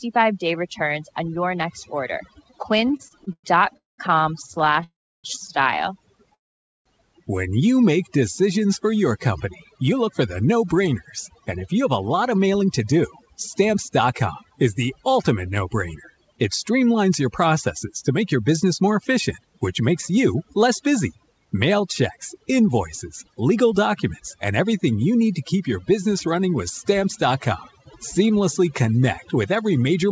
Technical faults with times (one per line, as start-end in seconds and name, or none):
0.00-30.12 overdone noise removal
2.78-6.35 repeated stalls (stutter)
3.77-4.00 call audio freeze
4.84-5.26 call audio freeze
6.35-6.87 call audio freeze
9.71-14.52 jitter buffer speed-up
18.11-25.61 jitter buffer speed-up